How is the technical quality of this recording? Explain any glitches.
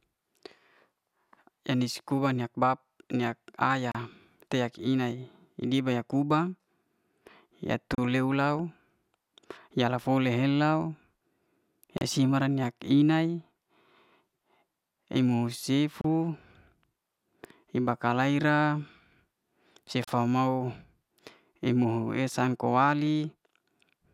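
The recording has one recurring glitch: a gap at a join of encoded pieces, at 3.92, 7.95, 11.98 (just before "mara niak i'nai"), 16.01 and 20.04 s. Separately encoded 4-second segments were spliced untrimmed, so encoder delay and padding leave a 32 ms gap with smeared edges that briefly interrupts the speech.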